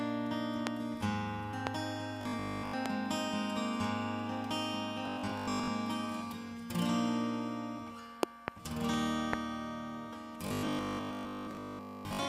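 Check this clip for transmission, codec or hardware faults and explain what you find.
Two kinds of fault turn up: a series of loud pops and three stretches of robotic sound from repeated short buffers.

Loud pops occur at 0.67, 1.67, 2.86 and 9.33 s, with a double pop between 8.23 and 8.50 s. Each is likely a sudden voltage step or pulse, from a connector, switch, static discharge or driver glitch, added to the signal path. The pulses peak about 25 dB above the programme, about 20 dB for the one at 2.86 s. They sound like sharp pops or thumps on top of the audio, which continues underneath.

The robotic sound from repeated short buffers runs from 2.22 to 2.74 s, 5.06 to 5.72 s, and 10.47 to 12.27 s. The likely cause is new audio arriving too slowly, so playback loops the last short block instead of waiting. The repeats form a steady 50 Hz buzz, which fits a 20 ms buffer. Roughly two-thirds or more of each stretch is repeated material. 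The result is a rigid, metallic drone that still loosely follows the underlying sound.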